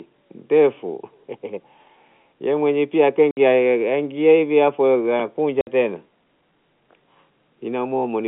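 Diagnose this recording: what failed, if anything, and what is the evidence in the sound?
The network dropped packets, and the receiver filled them with silence: 60 ms holes at 3.31 to 3.37 s, just after "ye mwenyewe pia", and at 5.61 to 5.67 s, each fitting six 10 ms packets. The waveform goes flat between hard edges, and the spectrogram shows blank full-height columns.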